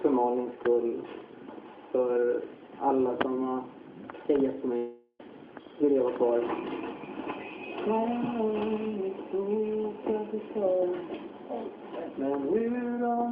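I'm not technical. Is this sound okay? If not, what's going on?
No. At about 4.77 seconds the sound breaks up: the last bit of audio is drawn out into a buzzy, fading smear for roughly four tenths of a second, goes briefly quiet, and the sound picks up again at about 5.21 seconds with a short piece simply gone. This is likely a long network dropout. The connection stopped delivering audio, so the receiving end filled the gap by stretching what it last had, and the missing part was never recovered.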